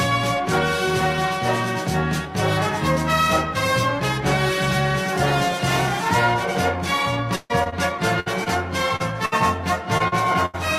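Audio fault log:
7.35–9.34 s, repeated packet loss (robotic sound): seven separate gaps, about 360 ms lost in all and the longest 141 ms, are each patched by extending the preceding sound. Unlike a single burst, the holes recur closely, so roughly a fifth of the stretch turns choppy with pieces missing.
9.98–10.02 s and 10.08–10.14 s, short concealed packet loss: gaps of 20 ms and 40 ms are covered by continuing the last sound and then blending back. Each is too short to fade audibly, leaving only a brief smear or wobble rather than a held tone.
10.46–10.56 s, burst of packet loss: about 80 ms in a row goes missing. The receiver stretches the last sound and turns it down across the gap, giving a held buzz or fading hiss before the audio resumes further on. That audible fade separates it from the short losses.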